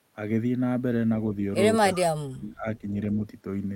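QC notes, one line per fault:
1.93–2.02 s, echo leak: likely an echo canceller letting loudspeaker pickup through, so a faint copy returns about 325 ms late, roughly 20 dB below the speech.
1.98–2.85 s, speech suppressed in double talk: the canceller, likely confused by overlapping talk, clamps the talker down, gapping speech for about 0.7 s with dips near 35 dB.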